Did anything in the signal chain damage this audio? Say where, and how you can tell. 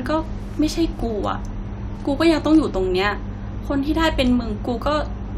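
No, nothing along the chain seems to have hurt this speech recording; I listened through and couldn't pick out any stage that left a mark on it.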